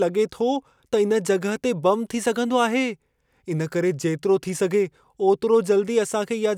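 Listening to this speech recording, nothing stood out as a technical problem anywhere in it.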